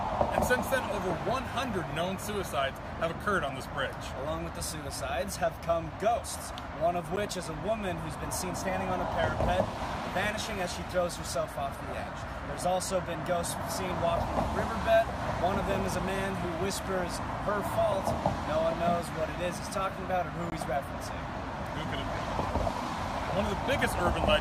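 Blocks of digital silence fall at 7.16 s and from 20.50 to 20.52 s. Stretches of 10 ms and 20 ms were zeroed, probably because the output buffer wasn't filled in time. The abrupt cut and return are heard as a tick, then a slightly longer gap.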